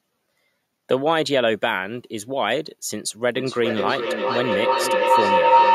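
A speech recording in which, from 3.35 s to the end, a tone near 1 kHz swells out of the sound, pulsing at roughly 0.4 s intervals and peaking about 6 dB louder than the talking. This is feedback howl. Two devices in the same room share the call, so the microphone picks up the loudspeaker and each trip round the loop adds level. The loop's favoured frequency outgrows everything else, repeating at the loop's delay.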